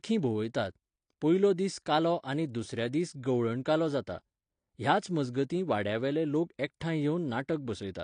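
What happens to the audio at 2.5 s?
At 2.5 s it's the same as everywhere else: dull, smeared speech with nothing above 9.9 kHz and a fizzy warble, likely AAC compression at a low bitrate.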